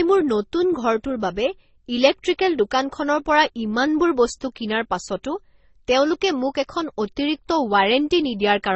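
From start to finish the speech carries two layers of damage: smeared, swirly highs with a second codec's graininess on top, and nothing above 8.1 kHz. That's likely transcoding between lossy codecs, an MP3 re-encoded to Opus, each pass stacking artefacts.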